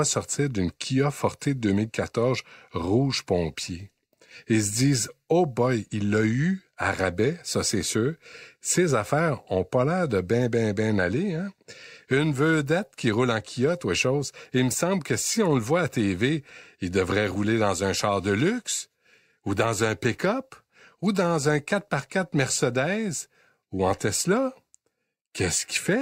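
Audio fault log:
No fault can be heard anywhere in the speech. Nothing in it calls for an entry in this log.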